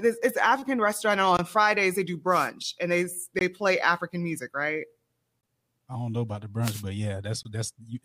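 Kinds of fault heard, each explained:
Gap between chunks: the audio arrives in 2-second pieces, leaving 20 ms silences, such as just after "restaurant and" at 1.37 s.
Wireless microphone noise hit: the FM radio link fades as reflections cancel, so receiver noise rises into bursts of static of about 0.2 seconds at 2.29 and 6.62 s.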